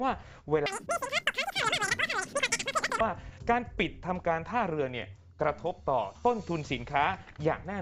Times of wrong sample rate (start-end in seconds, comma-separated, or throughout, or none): 0.66-3.00